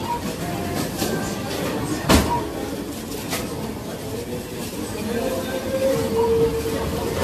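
From start to end, the audio shows generation loss, likely from being decoded and re-encoded about seven times with a lossy codec that points to AAC-LC around 64 kbit/s. Each pass adds fresh quantisation noise, so the sound turns swirly, hollow and smeared, attacks blur, and nothing remains above 14 kHz.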